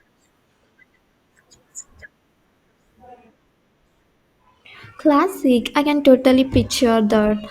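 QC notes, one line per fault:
No faults were found in this speech clip. Nothing needed flagging on this pass.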